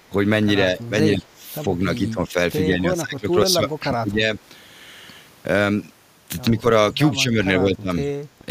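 Speech with speech suppressed in double talk: level dips of a few dB to around 20 dB at 0.75, 1.12, 1.61, 2.66 (lasting to 4.26), 6.53, 6.95, 7.59 and 8.39 s, likely from an echo canceller cutting the near talker during overlap.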